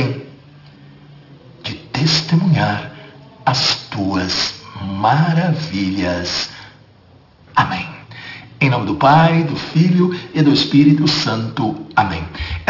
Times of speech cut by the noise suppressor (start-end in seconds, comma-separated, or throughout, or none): none